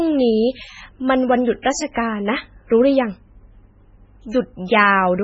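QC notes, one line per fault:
Throughout: MP3 compression. The speech sounds watery and swirly, with heavy codec damage and nothing above 7.7 kHz. This is likely a low-bitrate MP3 encode, roughly 16 kbps, where weak frequency lines were dropped and switched on and off between frames and the treble was cut at a fixed point.
0.63 to 0.76 s: one channel drops out. For about 130 ms the level falls abruptly by about 6 dB, with no other change to the sound. This is likely one stereo channel vanishing; because both channels carried the same sound, the mono sum simply halves.
1.62 to 1.65 s, 1.92 to 1.96 s, 2.69 s, 4.67 to 4.69 s: pre-echo. A short hiss of 14 to 37 ms leads each sharp attack, which sounds softened. The codec spread quantisation noise over the whole block, so noise meant for the loud onset filled the quiet moment before it.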